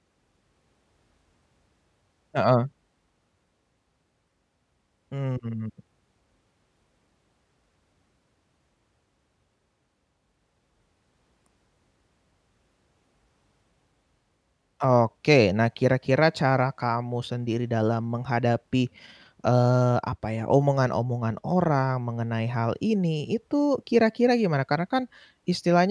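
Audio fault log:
Nothing to log here, as the speech comes through without a single fault worth noting.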